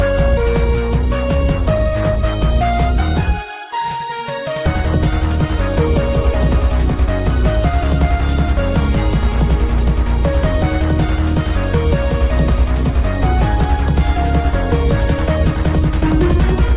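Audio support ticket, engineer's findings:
No faults found; the signal reaches the listener through the WebRTC call path with its content stopping at 4 kHz, consistent with a G.711 A-law narrowband link, which fits a 64 kbps stream.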